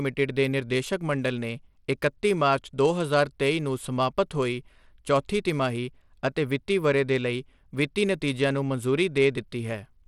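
From start to finish the speech carries a gritty, grainy texture, with the top end thin and unsteady and nothing at all above about 17.1 kHz. The damage is plainly audible throughout. The likely cause is Bluetooth SBC compression at a setting that fits a low bitrate of around 96 kbps. The encoder splits the audio into a few broad bands and shares too few bits among them, so the weak upper bands are starved or dropped and the rest are coarsely quantised, leaving granular noise and aliasing on the speech.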